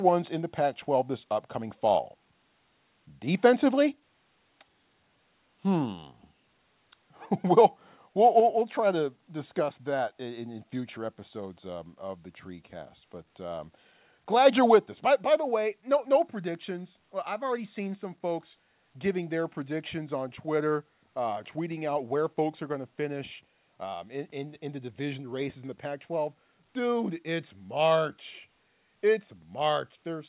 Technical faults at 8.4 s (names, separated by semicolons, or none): microphone volume stepped down